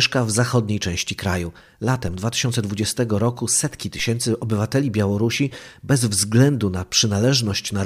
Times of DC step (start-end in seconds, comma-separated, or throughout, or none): 2.08, 3.99